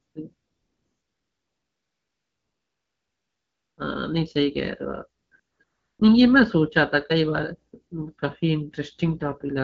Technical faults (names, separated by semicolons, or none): AMR comfort noise